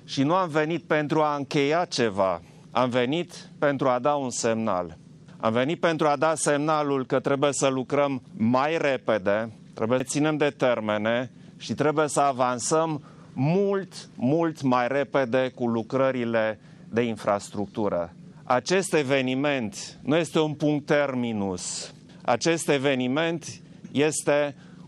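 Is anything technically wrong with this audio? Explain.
Yes, there is a CD skip at 10.00 s. A knock or disc flaw made the laser jump tracks, so playback mutes for a few milliseconds and resumes elsewhere, heard as a tick and a jolt. The waveform shows a tiny flat gap, and the spectrogram shows a thin vertical broadband line.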